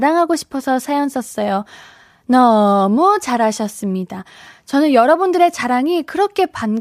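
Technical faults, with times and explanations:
No technical faults can be heard anywhere in this speech.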